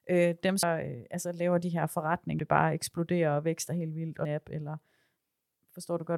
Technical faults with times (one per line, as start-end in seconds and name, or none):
0.63 damaged data in a compressed stream
2.39 damaged data in a compressed stream
4.25 damaged data in a compressed stream